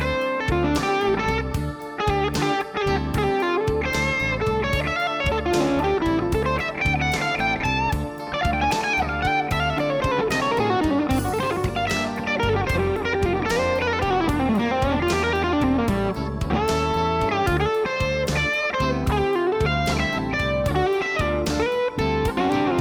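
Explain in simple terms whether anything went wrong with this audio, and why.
Nothing stood out on listening; no problems could be heard anywhere in the recording.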